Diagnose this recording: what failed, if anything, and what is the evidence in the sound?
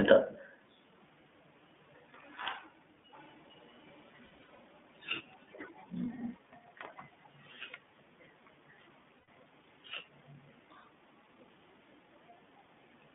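The speech passed through the iLBC codec, a narrowband VoIP coder that handles each 20 ms frame independently. The line band runs from about 150 Hz to 3.5 kHz, so everything above that is gone. What remains is intelligible but plainly rough and slightly synthetic, with a coarse edge throughout the clip. That texture fits the 15.2 kbps mode, where each frame's excitation is coded with limited precision.

From 3.12 to 5.88 s an echo leak is audible. A faint second copy of the speech trails the original by about 0.45 s and sits roughly 25 dB below it, so it is heard as a delayed shadow rather than a clear repeat. The likely cause is a far-end loudspeaker whose echo canceller failed to fully cancel what its microphone picked up and sent back down the call.

Network packet loss produced lost iLBC frames at three points. Between 4.26 and 4.58 s, about 200 ms of audio is missing, scattered across 320 ms, and the longest run is around 70 ms. 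A further 100 ms drops at 9.18–9.28 s, and 40 ms at 10.80–10.84 s. Each gap sounds like a held, faintly buzzy vowel, because the decoder repeats the last pitch cycle mixed with noise. Clean speech returns almost immediately afterward, since the frames decode independently.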